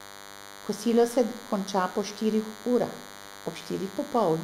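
DECT cordless phone buzz runs throughout the speech: a nearby handset's radio bursts every 10 ms get rectified, leaving a thin 100 Hz buzz about 20 dB below.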